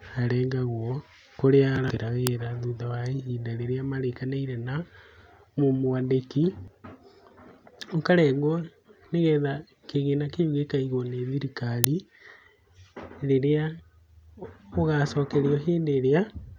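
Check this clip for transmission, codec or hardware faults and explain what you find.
The speech carries two bursts from an uninitialised buffer, at 2.27 s and 11.84 s. In each case a block was played before audio had been written into it, so whatever sat in memory was read out as samples. The result is a sudden, loud spray of digital noise, 0.73 ms long at 2.27 s, which fits a 32-sample block, and 2.9 ms at 11.84 s, which fits a 128-sample block. Unlike a dropout, which leaves a gap of silence, or a simple click, these bursts are garbage, and their length matches a whole buffer.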